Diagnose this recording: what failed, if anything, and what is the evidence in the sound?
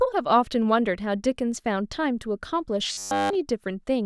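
Robotic sound from repeated short buffers, in the driver or buffer stage, from 2.92 to 3.35 s: the speech becomes a rigid metallic buzz at a fixed 100 Hz throughout. That pitch fits a 10 ms block replayed while fresh audio is skipped, likely from buffer underrun. Its steady pitch distinguishes it from codec warble.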